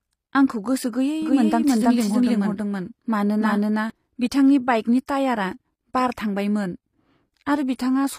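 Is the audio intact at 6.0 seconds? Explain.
No. At 6.0 s, as across the whole clip, the speech carries plainly audible damage, likely from HE-AAC compression at a low bitrate, around 24 kbps. The coder kept only the lower spectrum and synthesised the treble by copying lower bands upward under a coarse envelope, so upper harmonics fail to line up with the real ones. Nothing survives above 15.5 kHz, and s sounds come across as gritty, metallic or lispy.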